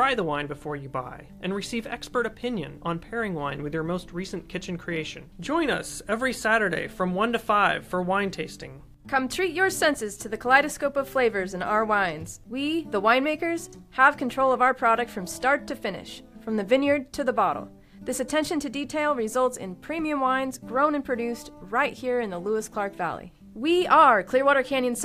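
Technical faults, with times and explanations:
No technical faults are audible anywhere in the audio.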